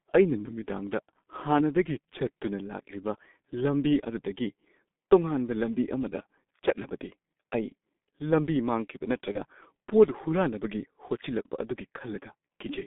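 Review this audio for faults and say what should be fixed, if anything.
The whole recording passed through a G.723.1 codec, a low-rate internet-telephony coder working in 30 ms frames at a rate that points to its 6.3 kbit/s mode. Because it keeps only a coarse, slowly updated model of the speech, the damage is heavy: the band runs only from about 200 Hz to 3.6 kHz, so the speech sounds muffled and hoarse, and consonants smear together. To prevent it, carry the call on a wideband codec at a higher bitrate instead of G.723.1.

From 9.32 to 9.39 s there is VoIP packet loss concealed by the speech codec. A stretch matching one 30 ms frame never arrived, so the decoder filled the hole by extending its last pitch and spectral envelope while lowering the gain. For about 70 ms the speech turns into a brief buzzy or noisy, fading smear, and it stays weak or distorted for a moment after real data resumes because each frame depends on the one before. 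To prevent it, stabilise the network path and enable redundancy or forward error correction for the audio stream.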